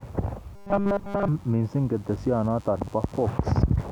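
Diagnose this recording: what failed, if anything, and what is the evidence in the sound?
From 0.56 to 1.28 s the speech becomes a rigid 200 Hz buzz: robotic sound from repeated short buffers, likely a buffer underrun looping 5 ms chunks.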